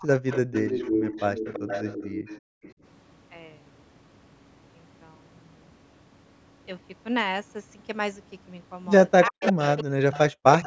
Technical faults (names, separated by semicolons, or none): speech suppressed in double talk; echo leak; background gated by the echo canceller